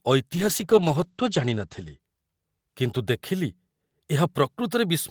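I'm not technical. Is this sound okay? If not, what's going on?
No. From 0.33 s to about 2.05 s the speech goes through a call bitrate drop. The connection briefly got worse, so the call sent the voice using far fewer bits. For most of that stretch it sounds muffled and rough or watery, with the crisp top end above 8 kHz missing. Unlike dropped pieces of a call, nothing cuts out or stutters. The voice keeps flowing, just duller, then clears up again.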